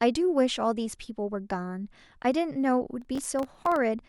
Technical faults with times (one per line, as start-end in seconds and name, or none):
3.02-3.76 processor overload crackle